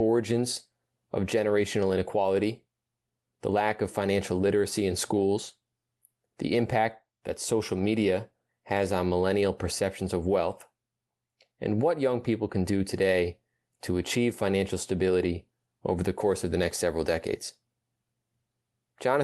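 Nothing in this speech recording stands out as a fault, and the call path it went through just leaves its usual coding texture and a cutoff of the very top end.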